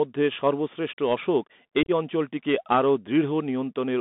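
Throughout, the speech carries the Bluetooth CVSD headset codec: a one-bit delta stream, consistent with 64 kbps, confined to about 200 Hz–3.6 kHz, leaving scratchy sibilants and granular hiss. From 1.83 to 1.90 s, between "সর্বশ্রেষ্ঠ অশোক" and "অঞ্চলটিকে আরও", unconcealed Bluetooth headset packet loss chops out about 49 ms across 52.5 ms. The gaps are abrupt holes, the longest 30 ms, suggesting around fifteen lost packets.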